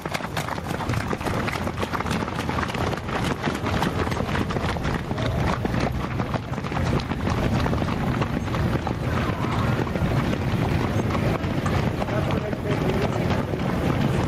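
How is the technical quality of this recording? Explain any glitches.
Quality is compromised by level pumping and recurring timing hiccups across these everyday sounds.

Gain pumping, throughout: the level swings by about 10 dB around loud sounds. The likely cause is gain set too high, with a fast limiter pulling it back down.

Clock drift between sender and receiver, throughout: the sender's clock runs about 4% fast, so the receiver's buffer keeps filling and must shed audio to stay in step.

Repeated timing corrections, 0.09 to 3.03 s and 9.40 to 14.25 s: the receiver cuts short pieces unevenly, speeding playback to 102% and then 104%. This is heard as small jumps and an unsteady pace.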